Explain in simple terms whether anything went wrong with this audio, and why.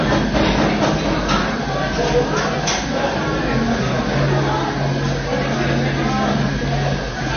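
Throughout the clip, nothing is heard above about 6.5 kHz, and the sound is watery and smeared. That is likely MP3 compression working with too few bits.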